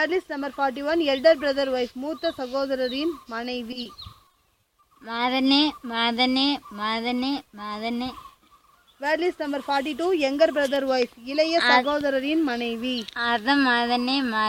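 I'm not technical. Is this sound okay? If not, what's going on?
No, there are two related problems. Both come from bits of the audio failing to arrive in time over a network connection, with the receiving end patching over the holes.

The first is short concealed packet loss, around 3.83 to 3.96 s. A single sliver of sound, about 20 ms, went missing. The receiver filled it by stretching out what came just before and then blending back in. You hear it as a tiny smear or wobble, a brief blip in otherwise continuous sound. It happens once and recovers straight away.

The second is repeated packet loss, giving a robotic sound, from about 4.28 to 4.85 s. This time the dropouts keep coming. There are several short gaps, none longer than about 20 ms, and roughly a sixth of that half-second is patched-in sound. Each patch barely finishes before the next hole arrives. That is what sets it apart from the single blip: instead of one smear, the sound turns choppy for a moment, with small pieces missing throughout the stretch.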